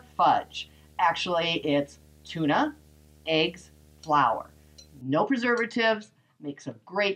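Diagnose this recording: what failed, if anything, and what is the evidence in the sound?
Video or display buzz, 0 to 5.01 s, in the analogue wiring. A 75 Hz field-rate buzz with hash sits well below the sound.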